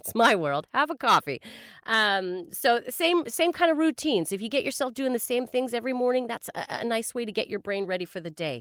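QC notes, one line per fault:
Nothing stood out on listening to this speech clip.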